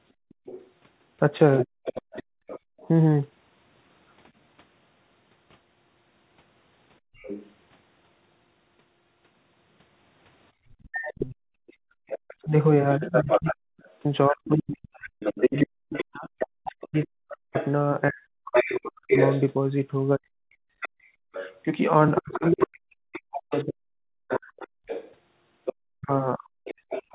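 From 0.13 to 2.79 s the background is gated by the echo canceller: while the loudspeaker plays, the canceller clamps the microphone, so the room sound drops by as much as about 36 dB, adding up to roughly 0.7 s of near-silence. Overlapping this, from 0.29 to 2.88 s, a second voice sits about 10 dB under the main talker, likely the other side's voice leaking through because the canceller failed to subtract all of the loudspeaker signal. At 1.65 s the talker dips by roughly 15 dB for a brief 40 ms, likely speech suppressed in double talk, with the canceller attenuating everything while both sides overlap.

The background gating recurs from 7.0 to 7.15 s, dropping about 38 dB, and leaked far-end voice follows from 7.15 to 7.53 s at about 15 dB below the talker. Gating returns from 10.52 to 12.07 s, dropping about 37 dB for around a second in total. From 10.8 s to the end the leaked voice is much stronger, only about 5 dB under the talker. 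From 12.45 to 26.72 s the talker repeatedly sinks or vanishes in pieces, by up to around 40 dB and for some 7 s altogether, as double-talk suppression fights the overlap. Gating sets in again from 24.82 s to the end, dropping about 35 dB. Throughout, the audio is band-limited to 4 kHz by the call codec, consistent with G.711 telephony.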